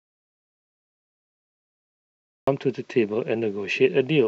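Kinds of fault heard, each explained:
Audio dropout to silence: the clip opens in dead digital silence, with no room tone at all, and the speech only arrives at about 2.47 s, cutting in partway through rather than starting cleanly. Whatever was being said before that point is simply gone. A gap of pure silence like this likely means the input was lost for a while, say a disconnected mic, a dropped link or a stray mute, while the recorder kept writing silence.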